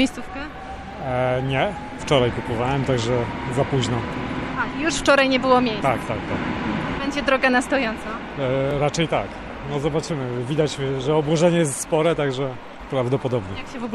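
At 8.71 s, late audio made the device replay its last 1.45 ms buffer once; this repeated buffer is heard as a brief click.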